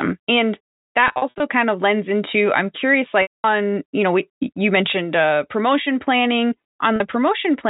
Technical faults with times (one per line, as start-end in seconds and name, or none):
1.08-1.40 packet loss with pitch repetition
3.22-3.44 packet loss with pitch repetition
6.96-7.00 packet loss with pitch repetition